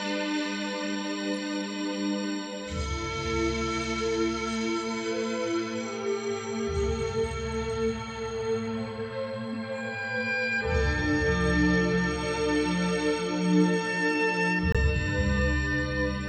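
At 14.72 s the audio drops abruptly into silence until 14.77 s, a corrupt frame muted: damaged bits made the decoder reject the compressed frame and the player filled the gap with silence. The 42 ms hole fits a single lost frame, and timing stays intact.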